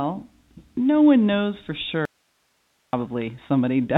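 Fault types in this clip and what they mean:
Audio dropout to a faint residue: Right after "no one knows for", the speech cuts off abruptly at 2.05 s and returns just as suddenly at 2.93 s. For about 0.88 s nothing remains but a thin hiss far below the speech level, with no fade or natural pause. This is likely a break in the signal feed while the path downstream stayed live, so the gap carries only the background noise of the still-open line.
Bit errors on a digital phone line: A brief burst of bit errors hits one frame at 3.21 s, on top of otherwise unchanged speech on this band-limited G.711 telephone line. It comes from bits flipped in transmission. Only a small fraction of bits were hit, and a corrupted sign or high-order bit throws one sample far from its true value, so the damage is confined to that one moment rather than a continuous crackle.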